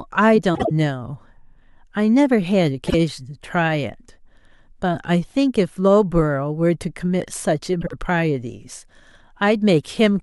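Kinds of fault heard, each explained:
Frames out of order: Three short stretches of the speech play with two adjacent blocks swapped, at 0.54, 2.87 and 7.81 s. The swapped blocks are about 52 ms, 26 ms and 52 ms long, consistent with exchanged runs of two frames, one frame and two frames. No time is lost. Each swap sounds like a brief garbled flutter. A spectrogram shows abrupt vertical discontinuities where formant tracks jump, and the waveform shows envelope breaks at those edges.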